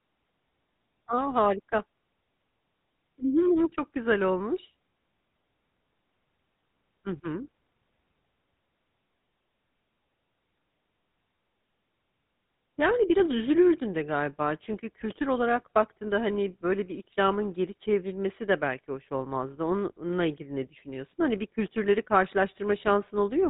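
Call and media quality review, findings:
GSM full-rate codec, whole clip. Buzzy, gravelly speech, band-limited below 4 kHz. Pulse-excited vocal-tract model, decimated excitation. Plainly audible; fits 13 kbps.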